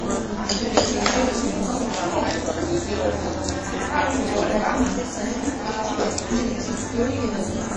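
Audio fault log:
Throughout: overlap-add ripple. The level swings by about 11 dB at a rate of around 200 Hz. Frames were rejoined with an overlap whose windows do not sum to a constant gain, so each short frame imposes its own rise and fall, heard as a metallic buzz with added tones beside each sound component.
Throughout: WMA compression, likely the cause of the plainly audible codec damage. Nothing remains above 10.1 kHz, and the damage fits a low bitrate of around 32 kbps. A long-block transform codec smears quantisation noise over tens of milliseconds and zeroes weak spectral lines, giving a ringing, washy texture.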